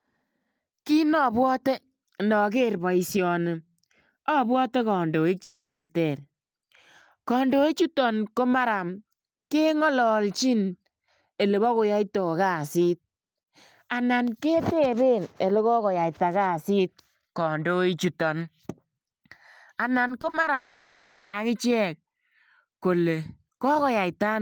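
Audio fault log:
5.43–5.91 s long network dropout: 0.46 s of audio lost, likely to a network interruption. The last sound stretches into a fading buzz, then about 0.28 s of silence. The spectrogram shows frozen harmonics thinning to a blank band.
20.07–20.49 s repeated packet loss (robotic sound): five gaps, none longer than 40 ms, with 120 ms patched (29% of the span), so the sound is choppy. The spectrogram shows repeated smeared vertical seams.
20.53–21.35 s long network dropout: 0.8 s missing, likely from lost network audio, all filled by continuing the last sound with no silence. The result is a droning buzz that shows as flat horizontal bands and a repetitive waveform.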